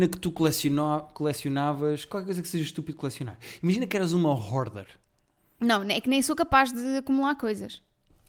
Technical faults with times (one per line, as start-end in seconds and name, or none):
none